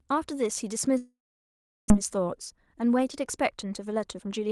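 From 0.97 s the speech breaks off. The last sound smears into a short buzzy hiss that dies away, and most of the gap up to 1.91 s is silence, about 0.72 s of it. When the speech returns, roughly half a second of it is simply gone. This is a long network dropout: no packets arrived, most likely from a stall on the connection, so the receiver filled the gap with a fading continuation of the last sound.

From 1.99 s to the end, the speech comes across as hurried. It runs about 11 % fast while the pitch stays where it was, in the Opus call sound with its top near 12 kHz. This is a jitter buffer speed-up. The delayed audio arrived in a bunch and left the buffer holding more than it aims for, a few tenths of a second extra. The receiver worked that backlog off by cutting out short pitch-period-sized pieces again and again, trimming about a third of a second in total.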